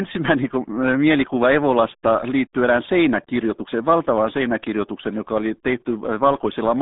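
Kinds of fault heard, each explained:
RealAudio 14.4 codec: The whole thing has that old dial-up streaming sound, with the speech squeezed into a narrow band of roughly 150 Hz to 3.7 kHz and nothing at all above 3.8 kHz. The codec damage is heavy, leaving the voice muffled, gargly and smeared from start to finish. That's what happens when speech is crushed down to a very low bitrate, and it fits an 8 kbit/s RealAudio 1 encode.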